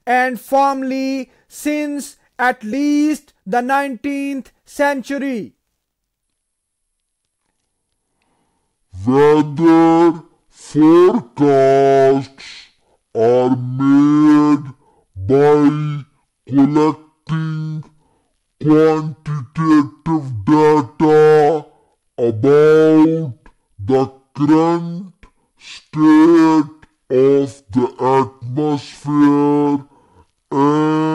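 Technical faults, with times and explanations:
Throughout, hard clipping: peaks crackle harshly, as the signal runs about 9 dB past the stage's limit and a few percent of samples are cut flat.
6.23 s to the end, section at the wrong speed: the speech turns deep and dragging, about ten semitones low, likely played at 0.537 times its recorded speed.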